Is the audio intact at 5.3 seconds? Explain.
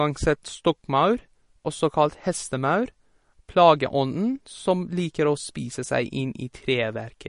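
No, 5.3 seconds sits inside MP3 compression damage that runs through the whole speech clip. Nothing comes through above about 10.6 kHz, and the encoder likely ran short of bits, which fits a low rate around 40 kbps. It's cutting the treble at that fixed point and dropping weak frequency lines that flicker on and off between frames. At this moment, as everywhere else, that comes out as a plainly audible watery, swirly texture with the top end missing.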